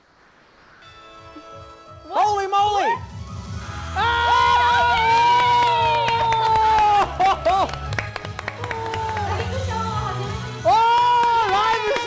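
The first 0.82 s carry comfort noise in place of the background: a flat, detail-free hiss about 3 dB quieter than the real room tone. That's likely discontinuous transmission, with the receiver synthesising filler until sound arrives. The call path, which fits G.722, stops at 8 kHz.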